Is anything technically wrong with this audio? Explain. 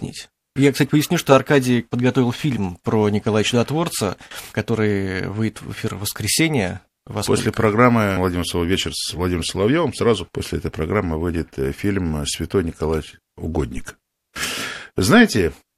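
Yes. At 13.77 s a phantom power thump interrupts the speech, lasting until 13.88 s. A supply switched on a live input sends a voltage step through the coupling capacitors. It sounds like a deep thump peaking near -17 dBFS, decaying within 24 ms.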